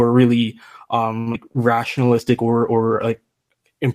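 At 1.19 s the speech hits a short stall from a late packet. A packet arrived behind schedule, the jitter buffer emptied, and the receiver held the last sound for about 70 ms (1.19 to 1.28 s) before resuming at the same point. Nothing is lost, but the sound in progress is drawn out with a faint buzzy, static quality, and everything after it lands roughly 70 ms later than before.

Two short concealed packet losses follow. The first runs from 1.32 to 1.36 s. About 40 ms of audio never reached the decoder, and only 16 ms of synthetic fill covers the gap. The receiver seems to have skipped ahead to catch up, trimming the earlier added delay by around 20 ms, so the sound jumps slightly with a small smear. The second, at 1.52 to 1.57 s, loses 20 ms and patches it with 25 ms of extrapolated sound. It is heard as a brief smear or wobble.

From 1.89 to 3.63 s a call bitrate drop sets in. The sound points to the encoder stepping down from about 32 kbps to around 18 kbps, holding at the lowest rate for roughly 1.65 s. 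At that rate Opus quantises coarsely and cuts the upper band, so the speech turns muffled and watery, with sibilants losing their edge, until quality recovers near the end.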